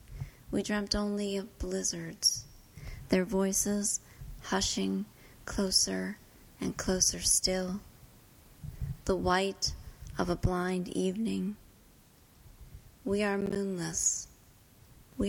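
The processor fell behind and missed several audio buffer deadlines in a row, producing processor overload crackle from 13.41 to 13.56 s as a handful of roughly ten-millisecond silent gaps with hard edges.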